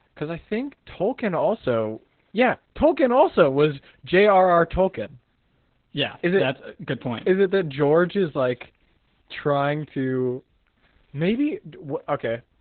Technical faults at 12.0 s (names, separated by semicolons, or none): Opus voice compression